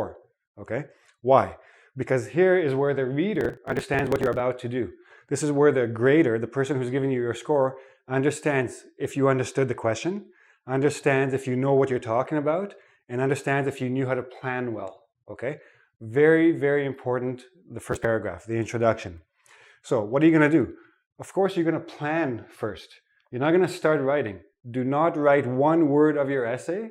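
Processor overload crackle appears twice, from 3.36 to 4.40 s and from 17.92 to 18.05 s: the processor misses its buffer deadlines again and again, and each missed chunk, roughly 10 ms long, is simply skipped. The resulting hard-edged gaps pile into a gritty, tearing crackle.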